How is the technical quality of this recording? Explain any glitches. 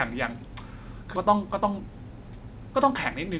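The recording has two glitches. The band is narrow, with nothing above 4 kHz, which fits a G.711 mu-law call path.

At 1.16 to 1.18 s there is a skip ahead. About 0.7 s of speech never plays. That stretch was dropped, on the way or by the jitter buffer, while later audio was already queued. Playback jumps straight across the hole with no fill, so the speech on either side is joined abruptly.

From 1.26 to 3.14 s comes a jitter buffer speed-up. The buffer was still holding more delay than it wanted. It trimmed tiny pitch-period slices again and again, about 150 ms in total. The speech plays at about 109% speed, with its pitch unchanged. It sounds hurried.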